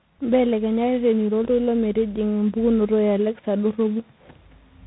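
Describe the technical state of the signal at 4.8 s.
Rough, noisy speech with nothing above about 3.9 kHz persists through the whole clip, including 4.8 s: tandem speech coding, where each codec stage re-encodes the previous stage's degraded output, ending at 24 kbit/s G.726.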